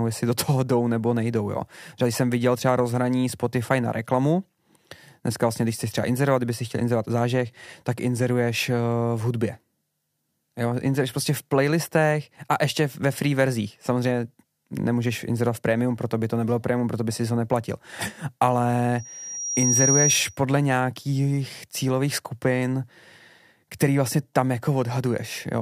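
From 18.98 to 20.39 s, a loudspeaker feedback squeal rises over the speech. A single tone near 5.7 kHz swells in under a second to a few decibels above the speech. The microphone picks up its own loudspeaker, and the loop gain exceeds one there. It ends just before "nějakých cílových skupin".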